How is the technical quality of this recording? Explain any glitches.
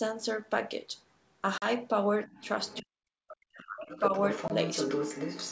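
The quality is compromised by three kinds of call fault in this speech.

Packet loss on an ADPCM call occurs at 1.58 to 1.66 s (40 ms, about two packets) and 4.48 to 4.51 s (20 ms, one packet). Silence fills each gap, and the speech then returns slightly distorted while the decoder's predictor resyncs. On the waveform these appear as flat-line holes; on the spectrogram, as vertical blank stripes.

The other side's voice leaks through at 2.25 to 2.81 s (about -25 dB), 3.28 to 3.34 s (about -20 dB) and 3.9 to 5.51 s (about -5 dB). This is likely from a loudspeaker echo the canceller missed. It shows up as a second harmonic pattern, strongest at the end.

Speech is suppressed in double talk at 2.81 to 3.01 s and 3.33 to 3.9 s, dipping as much as about 40 dB. The likely cause is the echo canceller ducking everything. The spectrogram shows the energy dropping in those spans.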